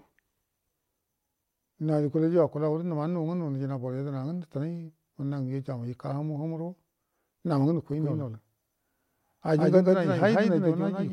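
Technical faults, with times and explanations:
7.93 s to end: doubled audio track. A full-band copy of the speech cuts in abruptly, trailing roughly 150 ms behind at about equal level. It has no decay or room colour. Likely cause: a slower second capture path or misaligned edit.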